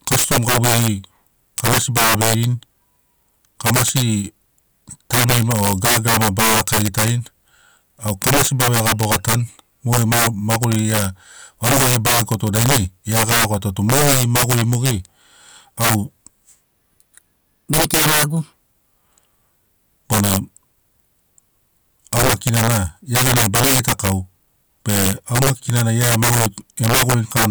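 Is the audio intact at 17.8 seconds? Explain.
No. At 17.8 s you're inside a section at the wrong speed, running from 16.65 to 18.53 s. That stretch plays back 1.24 times faster than it should, so speed and pitch jump up together, roughly four semitones higher, and the speech sounds squeaky and rushed before snapping back to normal. The likely cause is an editor or player fitting that piece to the wrong clock, which makes it run fast.

On top of that, the integer overflow that runs through the whole clip is present here too. The level is pushed about 13 dB past what the integer format can hold, and instead of being capped, the loudest peaks wrap around to the opposite sign. With a few percent of samples affected, you get harsh, violent cracks on the louder moments, much sharper and nastier than ordinary clipping.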